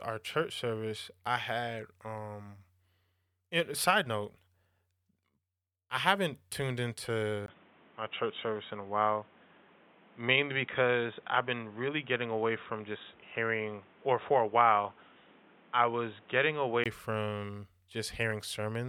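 Input switched to a poorer device, 7.46 s to 16.86 s: after a 20 ms gap the speech turns dull and boxy, losing everything above 3.8 kHz, with new noise roughly 30 dB down and no level jump. Recording likely moved to a narrower-band microphone or headset profile.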